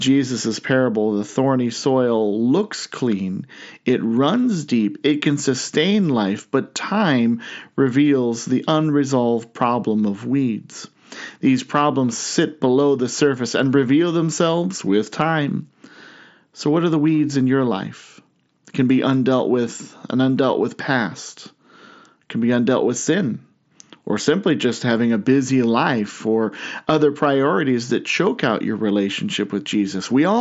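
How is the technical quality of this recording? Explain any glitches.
No glitches can be heard anywhere in this speech recording.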